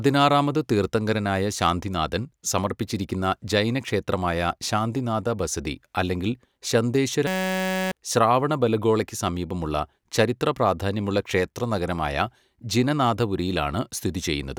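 A system hang loop from 7.27 s to 7.92 s interrupts this speech clip. A 5.33 ms slice, which fits a 256-sample buffer, repeats over a hundred times as a steady 188 Hz buzz, losing roughly 0.7 s of audio before "ശ്രാവണബെലഗോളയ്ക്ക് സമീപമുള്ള ചരിത്രപ്രാധാന്യമുള്ള" resumes.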